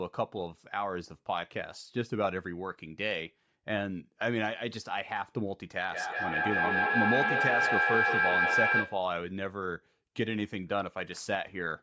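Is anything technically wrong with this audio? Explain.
Yes, there's a feedback howl from 5.86 to 9.11 s. Two devices in the room loop mic to speaker, gaining each trip, so a tone near 1.5 kHz builds, pulsing roughly every 200 ms and peaking about 4 dB above the speech.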